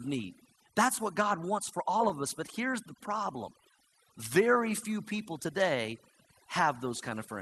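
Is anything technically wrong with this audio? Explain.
Yes, three things stand out in this speech clip.

Overdone noise removal runs the whole way through. The noise suppressor is set so aggressively that individual frequency bands near its noise estimate get pulled right down or switched off, and the softer parts of the voice go with them. You hear a background that's almost dead silent apart from little twinkling specks. The top end stopping at around 12 kHz fits the Opus call path and isn't part of this problem.

Between 1.75 and 2.50 s there's a cluster of scattered short gaps. A handful of packets, about five, went missing or turned up too late, spread across that stretch. The receiver covered each one by stretching the last bit of sound forward, and no single patch runs longer than roughly 10 ms. The speech stays clear, but you pick up brief ticks, tiny smears and little hiccups dotted through that window.

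From 3.38 to 3.91 s you get a jitter buffer slow-down. The buffer was running low or had just raised its target delay, so it padded things out by repeating single pitch periods and slivers of pause over and over. That adds about 47 ms, so the passage plays at roughly 92% speed with no change in pitch. Sounds get drawn out.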